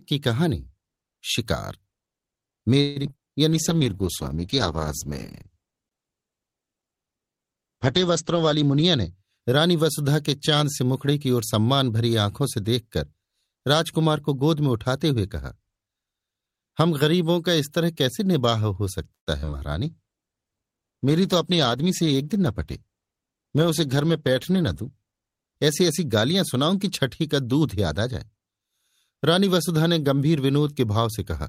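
From 2.81 to 3.20 s there is repeated packet loss, heard as robotic sound. Five gaps fall close together, the longest 147 ms. Each is filled by stretching the previous sound, so nearly half the span is concealed. The result is choppy, with pieces missing.

A jitter buffer slow-down follows at 3.24 to 3.98 s. The receiver repeats short pitch periods to rebuild its reserve, adding 76 ms. The sound plays at 91% speed with unchanged pitch. Syllables feel drawn out.

At 3.50 s a call bitrate drop begins and lasts until 9.17 s. The bandwidth estimate fell, so the encoder went from 48 to 10 kbps for over five seconds. It also cut the audio band from 20 kHz to 8 kHz. The sound turns muffled and watery.

Overlapping its end, a jitter buffer speed-up runs from 8.47 to 9.76 s. Excess buffered audio is trimmed by cutting pitch periods, about 150 ms in total. Playback runs at 110% speed with the same pitch. 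It sounds hurried.

Repeated packet loss returns at 19.15 to 19.55 s. There are four gaps, the longest 118 ms, with about 45% concealed. The same choppy, robotic quality is heard.

A second call bitrate drop spans 19.85 to 27.29 s, from 48 to 14 kbps for nearly five seconds. The audio sounds rough and coarse.

Within it, a second jitter buffer speed-up at 21.44 to 22.88 s removes about 100 ms. Speed rises to 106%, with slightly rushed delivery.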